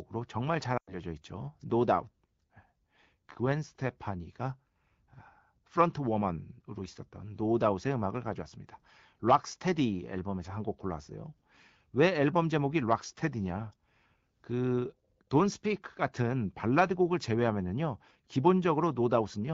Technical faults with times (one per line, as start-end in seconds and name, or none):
0.77-0.95 lost AMR speech frames